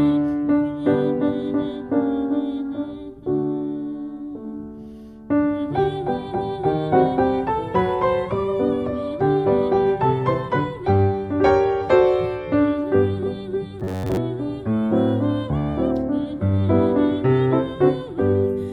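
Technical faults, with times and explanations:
13.80 to 14.17 s, robotic sound from repeated short buffers: for most of that stretch the sound turns into a rigid metallic buzz at 93.8 Hz. Likely cause is late-arriving audio, with a roughly 10.7 ms chunk replayed over and over.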